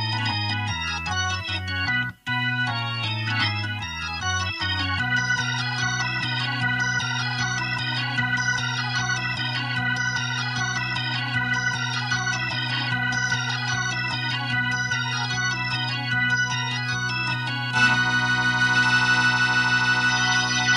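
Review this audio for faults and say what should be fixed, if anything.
No faults can be heard anywhere in this audio. Nothing here needs to be fixed.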